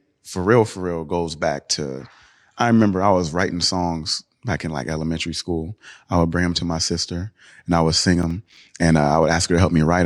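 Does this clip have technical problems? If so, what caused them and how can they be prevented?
Yes. From 8.23 to 8.57 s, just after "and I would sing" and before "and uh", the speech is broken by a short burst of gritty crackle. This is processor overload crackle: the processor fell behind and missed several buffer deadlines in a row. Each miss dropped in a brief hard-edged silence, and the spacing suggests buffers of around 5 ms. It can be prevented by reducing processing load or using a larger buffer size.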